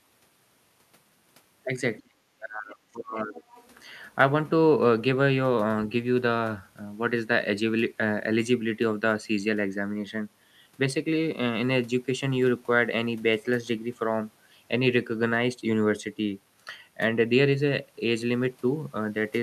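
From 2.02 to 3.46 s the speech is suppressed in double talk: the level dips by around 35 dB in places, most likely because the echo canceller confused both sides talking at once with echo. The waveform shrinks in level where the dips occur.

At 3.54 to 3.74 s the other side's voice leaks through as a faint scrap about 30 dB below the speech, likely residual loudspeaker echo, showing as a weak, separate harmonic trace on the spectrogram.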